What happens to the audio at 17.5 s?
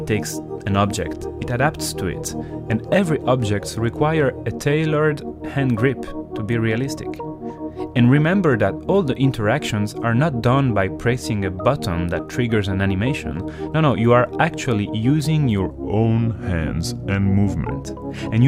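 At 17.5 s the sound is dragging and sits lower than before, roughly two semitones down, with everything slowed to about 0.87 times its proper pace. This is a section at the wrong speed, running from 15.71 s to 17.71 s, after which normal speed returns. Because pitch and tempo drop together and switch abruptly at both edges, the likely cause is that stretch being played back against the wrong clock rate, stretching it in time.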